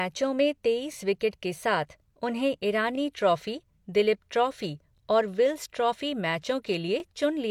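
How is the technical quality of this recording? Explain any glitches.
The recording has one recurring glitch. Overlapping chunks appear at 0.93–0.95 s (before "विकेट के साथ उन्हें"), 2.95–2.98 s (before "ट्रॉफी दलीप ट्रॉफी और"), 4.98–5.00 s (before "और विल्स ट्रॉफी"), and 7.00–7.02 s. The speech was handled in 2-second blocks, and each one began about 23 ms before the previous one ended. That slice plays twice at every join, so you hear a stutter-click every two seconds.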